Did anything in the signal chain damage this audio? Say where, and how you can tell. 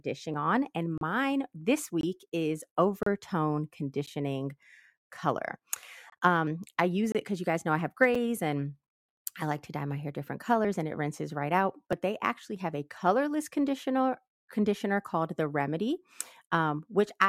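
Yes. At 0.34, 6.47, 10.65 and 11.93 s the speech jumps ahead with no silence, losing a few tens of milliseconds each time. This is likely a dropped buffer (overrun) at the driver or buffer stage: unread samples were overwritten and the two sides spliced together.

Hard-edged silent holes cut in at 0.98 to 1.01, 2.01 to 2.03, 3.03 to 3.06, 4.06 to 4.07, 6.10 to 6.12, 7.12 to 7.15 and 8.15 s, lasting 7 to 35 ms and spaced about one second apart. These are gaps between stream segments from the streaming or network stage. Timestamps on consecutive 1 s segments left small holes, and the player filled them with silence. Nothing is lost, only time added.

From 12.41 to 12.56 s the speech and the background noise drop together by about 4 dB, switching abruptly with no fade. That points to a sudden gain jump, likely in digital processing, where a gain setting was applied between one sample and the next without a ramp.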